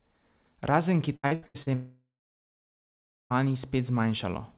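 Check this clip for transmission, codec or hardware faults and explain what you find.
Two transmission faults follow one another in this speech clip, heard through a narrowband call path with nothing above 4 kHz.

From 1.16 to 1.69 s there is repeated packet loss (robotic sound). Five separate holes, the longest about 81 ms, are each patched by extending the preceding sound, so over half the stretch is concealed. The speech turns choppy. Because the holes are brief and quickly followed by real audio, this is not a single dropout.

From 1.74 to 3.33 s comes a long network dropout, likely from audio that never arrived. The last sound is stretched into a fading buzz or hiss, then roughly 1.2 s of silence follows before speech resumes with the missing part gone.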